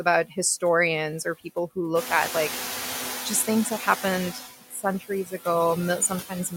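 Noise suppressor artifacts run through the whole recording: the suppressor trims only about 3 dB of background frame by frame, so the noise sinks between the words and rises under them.

Noise suppressor catching up, 1.95 to 3.51 s: the room noise jumps by about 15 dB near 2 s, and the suppressor's estimate lags. The louder noise comes through with less reduction at first, then settles to about 6 dB of reduction over roughly 1.6 s.

Speech cut by the noise suppressor, 4.61 to 5.47 s and 6.0 to 6.53 s: the suppressor mistakes parts of the speech for noise and dips them by up to about 17 dB and about 13 dB. Roughly a third of a second and then a brief stretch of speech sound swallowed and faint.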